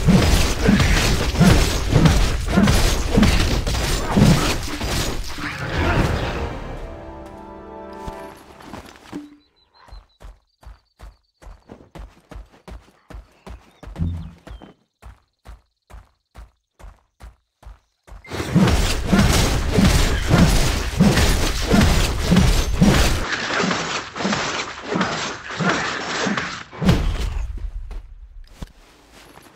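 From 23.24 to 26.86 s the sound abruptly turns duller and boxier: nothing is left above 7.8 kHz, the level drops by about 5 dB, and a new background noise appears, roughly 40 dB below the signal. There is no gap at either switch. This is likely an input switched to a poorer device. Unlike a plain bandwidth cut or codec drop, the tone, level and noise floor all change together, then snap back at 26.86 s.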